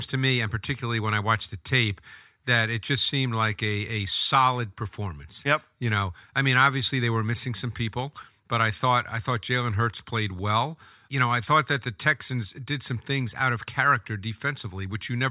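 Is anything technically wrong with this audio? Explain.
No, nothing technically wrong stood out on listening to this speech recording.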